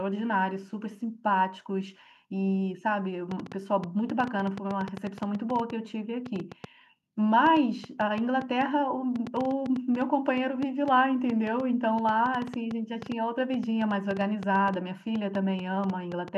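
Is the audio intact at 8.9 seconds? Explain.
No, a train of clicks runs from 3.31 to 16.29 s: irregular popping about six times a second, peaking roughly 5 dB above the speech, likely from interference.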